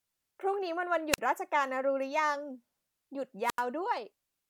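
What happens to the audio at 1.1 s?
A short burst of hiss gives way to a near-silent hole of about 41 ms, then the speech returns, spanning 1.11 to 1.19 s. This is a wireless microphone squelch dropout: the radio signal faded until the receiver's squelch muted the output.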